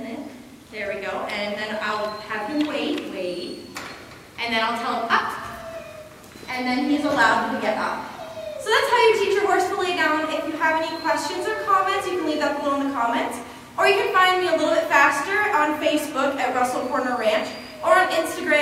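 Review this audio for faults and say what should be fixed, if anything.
Nothing in this audio needs to be fixed, as there are no faults to report.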